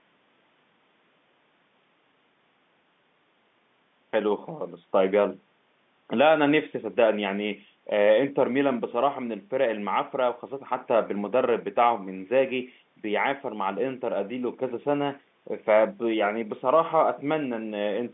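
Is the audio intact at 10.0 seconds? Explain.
Yes, the audio is intact at 10.0 seconds, with nothing there beyond the narrow telephone band of G.711 coding, which leaves no sound above about 3.8 kHz.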